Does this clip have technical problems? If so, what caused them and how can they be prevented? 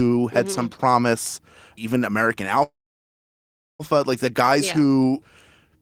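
Yes, a call audio freeze from 2.63 to 3.81 s: the sound stalls, then goes nearly silent for about 1.08 s before resuming intact at "like the guys yeah". The likely cause is delayed packets draining the jitter buffer. Prevention: prioritise call traffic and allow a deeper adaptive jitter buffer.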